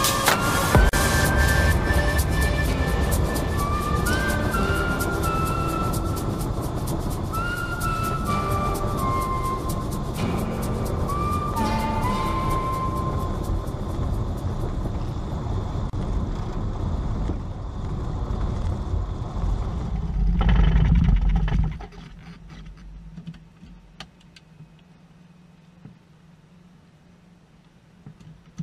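The audio drops to silence twice: about 38 ms at 0.89 s and about 33 ms at 15.90 s. Each is a gap at a join of encoded pieces. Separately encoded sections were joined untrimmed, leaving encoder delay and last-frame padding. Edges are smeared.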